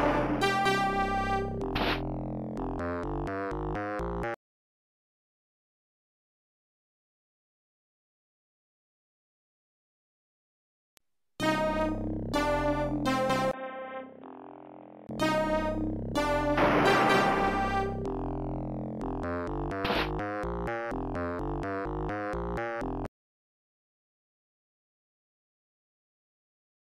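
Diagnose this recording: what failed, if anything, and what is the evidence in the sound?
At 13.51 s the input most likely switched to a poorer device, at the driver and device stage, until 15.09 s. A 20 ms gap opens, then the sound turns dull and roughly 10 dB quieter over new background noise roughly 30 dB below the signal. A spectrogram shows everything above 3.8 kHz cut off during that span, with a smaller waveform envelope.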